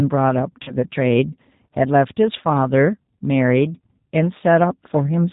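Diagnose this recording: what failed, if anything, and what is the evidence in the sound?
Throughout, the speech is band-limited with nothing above 4 kHz, and it has a plainly audible rough, slightly synthetic grain. That points to the codec stage, specifically G.729 at 8 kbit/s. At that rate the decoder rebuilds each 10 ms frame from a vocal-tract filter, a pitch predictor and a handful of pulses. It cannot carry the fine waveform detail, so the voice loses its natural texture and takes on a buzzy, modelled quality.

From about 0.63 to 0.74 s, the voice is stretched into a buzzy tone or coloured noise that fades, then returns weak and distorted before recovering. This is VoIP packet loss concealed by the speech codec, a network fault. About 40 ms of audio went missing, which fits two lost 20 ms packets. The decoder filled the gap by repeating its last pitch and filter with decaying gain. 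Because each frame builds on the previous state, the damage persists after packets resume.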